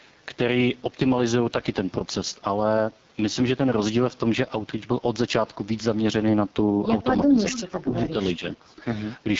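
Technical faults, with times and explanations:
Throughout, AMR wideband (HD Voice) codec at a heavily damaged low rate: the speech sounds rough and raspy, and nothing is heard above about 7.3 kHz. The sound points to a rate near 6.6 kbit/s, one of the two lowest AMR-WB modes. At that rate the pulse-driven model of the vocal tract has too few bits to shape each sound well. That gives the grainy, buzzy edge. The top band, from 6.4 kHz up, is filled with shaped noise instead of real detail.
7.28 to 7.37 s, 7.62 to 7.94 s and 8.39 to 8.8 s, speech suppressed in double talk: the speech dips sharply in three stretches. The first dip is brief, about 100 ms and roughly 10 dB down. The later two each last about 300 ms and go down about 20 dB and about 25 dB. The likely cause is an echo canceller that could not tell this talker apart from the returning far-end sound. It turned both down together, so the speech fades or thins.
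7.5 to 7.63 s, echo leak: a faint, delayed copy of the speech comes back, about 15 dB below the talker. It trails the original by 388 ms, so it is heard as a separate late echo and does not blend in. The likely cause is a loudspeaker on one end. The echo canceller there did not remove everything its microphone picked up, and the leftover was sent back down the line.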